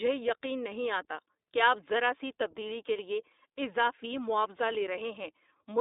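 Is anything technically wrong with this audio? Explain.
Yes. Throughout, the speech carries iLBC codec damage. Each 20 ms frame is coded independently, sounding rough and synthetic. A spectrogram shows a hard ceiling near 3.8 kHz, consistent with a 15.2 kbps mode.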